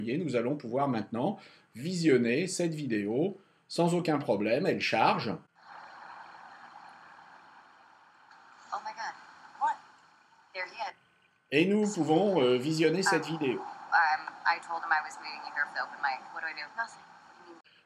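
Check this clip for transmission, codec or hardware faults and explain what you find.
Nothing found: no transmission, codec or hardware faults are audible anywhere in the clip.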